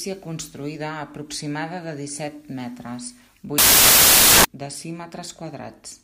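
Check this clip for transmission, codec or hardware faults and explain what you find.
One fault is present in this speech clip. From 3.58 s to 4.45 s, just after "aproximada de disset metres", the samples are built from the wrong bytes. The reader assembles each sample with its bytes misaligned or swapped. The rapidly changing low-order bits end up as the large part of each value. The result is loud, harsh broadband noise replacing the sound for under a second.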